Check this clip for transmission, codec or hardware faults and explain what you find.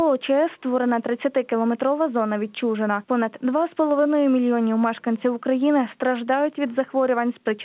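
Nothing stood out on listening beyond what a narrowband telephone-style call path would account for, with the sound stopping at about 4 kHz, as expected for a 64 kbps G.711 A-law link.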